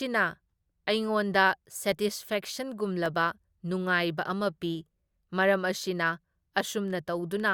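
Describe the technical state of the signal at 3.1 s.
At 3.06 s the speech drops out in a block of digital silence lasting about 0.73 ms. The output was likely not filled in time, so samples became zeros. The length fits a 32-sample buffer. The abrupt edges make a single tick.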